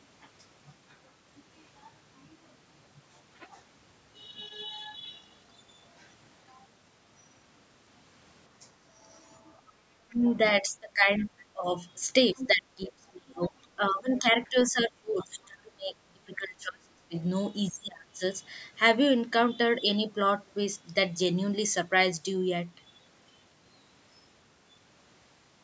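Speech recorded through a call's microphone processing, with nothing above 8 kHz. Background gated by the echo canceller occurs at 9.63 to 9.78 s, where the room sound dips by about 9 dB for roughly 150 ms. While the loudspeaker was playing, the canceller clamped the microphone and released it moments later. Speech suppressed in double talk runs from 10.06 to 18.22 s. Across roughly five seconds in total, the talker's voice sinks, at its deepest by around 30 dB, and breaks up. The likely cause is that both sides spoke at once, so the canceller could not separate the local voice from the echo and turned everything down. The other side's voice leaking through appears at 10.12 to 11.26 s, about 20 dB below the talker, at 12.38 to 12.48 s, about 10 dB below, and at 13.45 to 15.26 s, about 25 dB below. This is likely far-end audio from the loudspeaker that the echo canceller failed to remove fully from the microphone.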